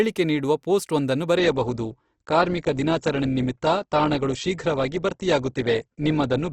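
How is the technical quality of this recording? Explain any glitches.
The quality takes a clear step down partway through, and it never recovers. From 1.36 s, right after "ನೀಡುವ ಪೋಸ್ಟ್ ವೊಂದನ್ನು", to the end, you're hearing an adaptive stream at a lower bitrate. The connection slowed, so the player switched to a leaner version with no gap, which sounds like a jump from about 64 kbit/s Opus to around 12 kbit/s. The treble vanishes above 8.2 kHz, and the speech turns duller and more smeared, with more codec artefacts.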